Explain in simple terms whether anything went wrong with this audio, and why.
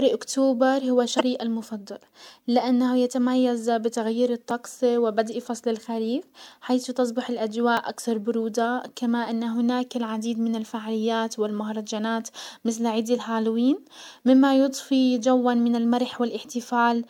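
Two kinds of trouble turn up in this speech. The first is damaged data in a compressed stream. At 1.17 to 1.21 s, just before "المفضل لانه يتميز بتغيير", and again at 5.33 s, just before "فصل الخريف حيث تصبح", a short glitch breaks through. Part of the compressed data was corrupted there, so the decoder lost its place and had to resync.

The second is a block of digital silence, at 4.51 s and at 7.77 s, between "فصل الخريف حيث تصبح" and "اكثر برودة كما ان". Each time the sound cuts out for about 2.7 ms and snaps back, which you hear as a tiny tick. A gap that size fits a 128-sample block that never got filled in time.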